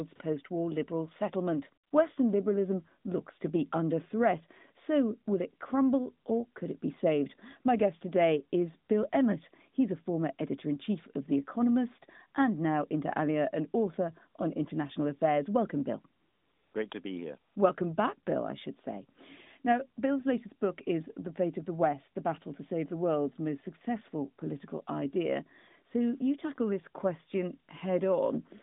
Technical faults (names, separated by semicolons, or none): AMR comfort noise